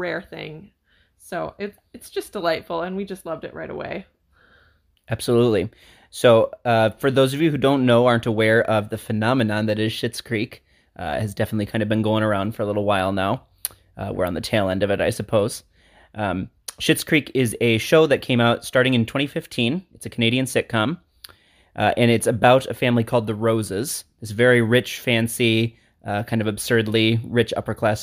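No technical faults can be heard anywhere in this speech recording. There is nothing in it to mark with a time or a value.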